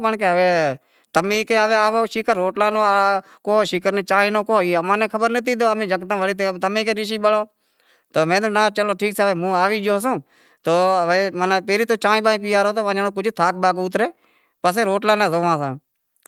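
No technical faults occur at any point in the speech.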